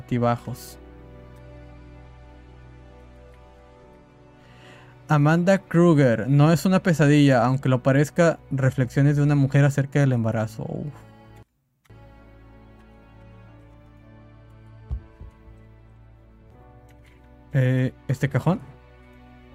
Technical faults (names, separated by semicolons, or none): none